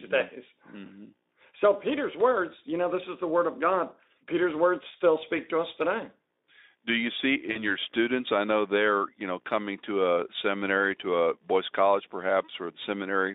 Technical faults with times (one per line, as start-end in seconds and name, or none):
7.51-7.70 VoIP packet loss concealed by the speech codec